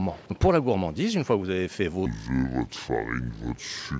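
From 2.06 s to the end at 4.00 s, the audio plays at two-thirds speed and about 7 semitones low, a wrong sample rate fault consistent with 24 kHz material played at 16 kHz. On a spectrogram, events stretch in time and all frequencies shift down together.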